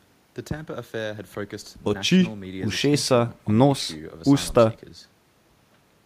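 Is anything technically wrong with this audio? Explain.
No, nothing technically wrong stands out here; it's a short bit of speech and it all comes across just as it should.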